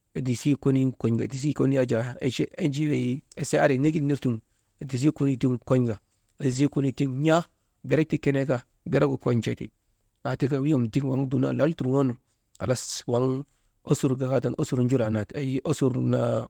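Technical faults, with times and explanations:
1.17–1.43 s, 2.93–2.95 s, 3.83–3.97 s, 6.51–6.57 s, 11.15–11.25 s: lost packet rebuilt from error correction. Lost packets were replaced by low-bitrate copies carried in the following packets. There is no gap. These patches of speech sound rougher and noisier.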